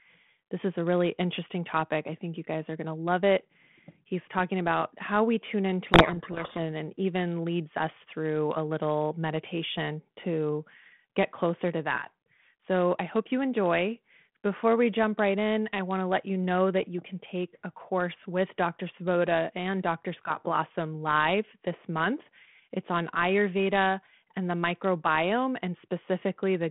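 Speech over a telephone-band G.726 link, 32 kbit/s, passing roughly 150 Hz to 3.5 kHz, shows a codec payload misread from 5.86 to 6.59 s, between "about how we tune" and "and even leads us". The decoder takes the G.726 code words in the wrong bit order, so the speech is buried in harsh distortion. Unlike the steady rasping hiss of a low-bitrate G.726 link, this starts and stops abruptly, lasting only while the packing disagrees.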